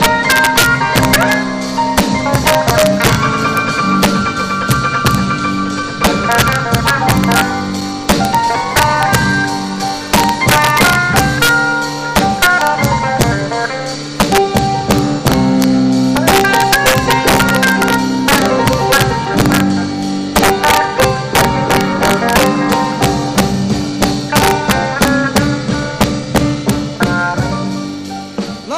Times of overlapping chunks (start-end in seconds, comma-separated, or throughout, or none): 9.22